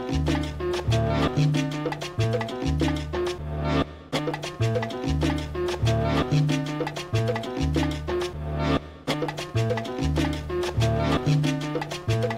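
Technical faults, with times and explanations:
Nothing here stands out as a technical problem; the audio just runs along without anything catching the ear.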